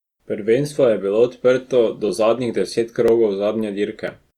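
Speech clip with periodic USB or driver dropouts: from 2.09 s, just after "je bilo odprto do", to 4.08 s, about 1 ms of audio is skipped roughly once per second, giving about three ticks. Each shows as a thin vertical broadband line on a spectrogram and a small waveform jump, consistent with a background task stalling the audio driver.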